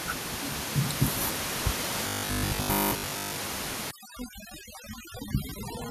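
From 2.07 to 3.39 s the speech turns into a rigid 50 Hz metallic buzz: robotic sound, likely from repeated short buffers, each replaying about 20 ms while most real audio is skipped. A spectrogram shows evenly spaced 50 Hz harmonic lines.

From 3.91 s to the end, overdone noise removal strips the room noise, which sits about 15 dB below the speech, to near silence with twinkling specks. The spectrogram shows patchy, blotchy gaps.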